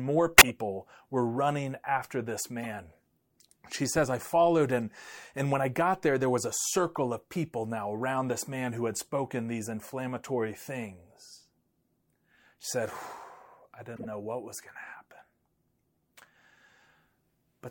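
Right at the start, from 0.34 to 0.50 s just before "were running after this", there's a corrupt frame decoded: damaged bits in a few compressed frames got played anyway, so energy lands at the wrong frequencies and you get a loud chirp, squeak, blip or burst of noise. The same fault recurs, quieter, at 2.61 to 2.66 s, at 6.95 s, and at 13.96 to 14.06 s. At 4.90 s, between "says I followed and" and "and when I got", it's barely audible.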